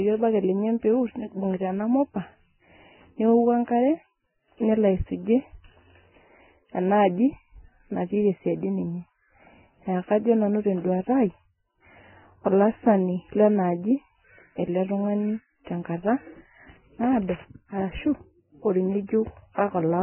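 Throughout the speech, the likely cause is heavy Vorbis compression at a very low bitrate, around 9 kbps. Nothing survives above 3 kHz, and the remaining upper band is quantised so coarsely that fine detail turns to hiss, leaving a dull, grainy, smeared sound.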